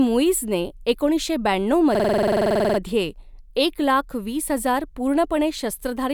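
A system hang loop runs from 1.95 to 2.79 s. The machine stalled while the sound hardware kept replaying one 46.4 ms slice of its ring buffer, which fits a 2048-sample buffer, eighteen times over. The repeats come at 21.5 Hz, so the speech turns into a rapid, rattling stutter.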